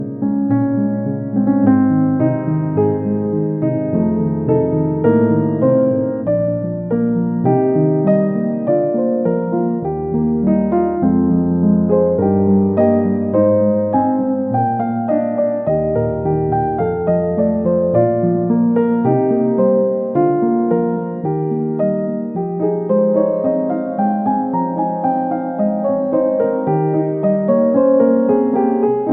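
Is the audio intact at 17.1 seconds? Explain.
Yes, the audio is intact at 17.1 seconds, with no fault present at that moment.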